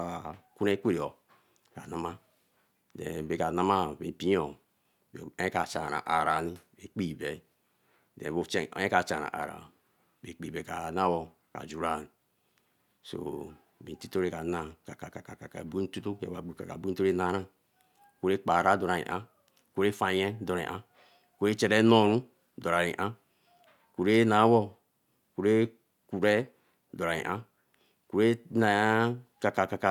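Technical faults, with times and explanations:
No technical faults can be heard in the clip.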